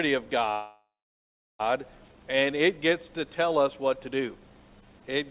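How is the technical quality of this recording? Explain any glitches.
A single glitch stands out, heard through a narrowband call path with no content above 4 kHz, which fits a G.711 mu-law codec at 64 kbps. From 0.52 to 1.61 s there is a call audio freeze. The last sound stretches into a fading buzz, then about 0.69 s of silence. This is likely caused by delayed packets emptying the jitter buffer. Unlike a dropout, nothing is lost. The audio resumes exactly where it stopped, now running about 1.07 s late.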